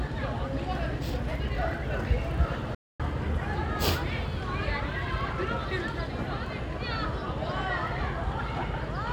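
At 2.75 s the sound stops abruptly and stays silent for 0.25 s, resuming at 3.00 s. This is a playback stall, likely from the player running short of data or having its thread blocked. The waveform shows a flat gap, and the spectrogram shows a clean, empty vertical band.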